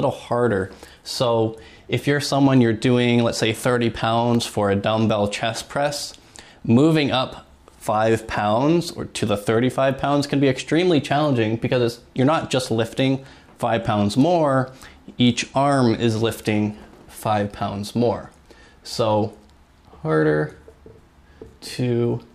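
At 4.13 s, a short cluster of CD scratch ticks begins, ending by 4.56 s. Three clicks fall within that span, none longer than about a millisecond. A blemish on the disc surface corrupts more data than the error correction can reconstruct, once per revolution, so the player interpolates or mutes the damaged samples each time the spot passes the laser. The result is a few brief, regularly spaced ticks cutting into the sound.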